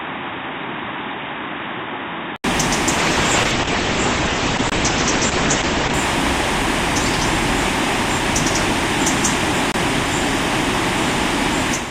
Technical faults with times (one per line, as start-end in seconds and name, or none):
0.00-2.44 input switched to a poorer device
2.98-6.00 call bitrate drop
4.70-4.72 gap between chunks
9.72-9.74 gap between chunks